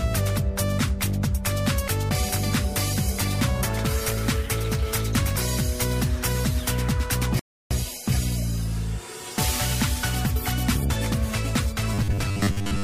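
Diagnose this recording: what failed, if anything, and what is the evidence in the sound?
Bluetooth stall, 7.39 to 7.71 s. The sound drops to silence for about 315 ms and then resumes, with no crackle or fade at either edge. That clean gap points to the wireless link rather than the recording itself. The likely cause is radio interference delaying packets on the way to the headphones: their small buffer emptied, playback halted, and it restarted once the retransmitted data arrived.

Robotic sound from repeated short buffers, 11.94 s to the end. The audio turns into a rigid, metallic buzz at a fixed 100 Hz that still loosely tracks the underlying sound. This is a driver or buffer fault. Fresh data is arriving too rarely, so the same 10 ms chunk is likely being looped to fill the gaps, and the loop rate sets that pitch. Most of this stretch, roughly two thirds or more, is repetition rather than real audio.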